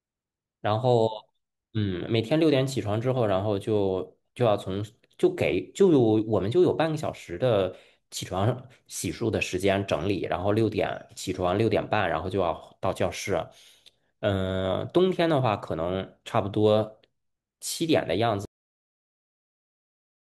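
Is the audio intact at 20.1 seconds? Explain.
No. A cut-off end begins at 18.45 s: the final buffers were never written, so speech halts mid-sound into digital silence, a flat waveform and blank spectrogram through 20.1 s.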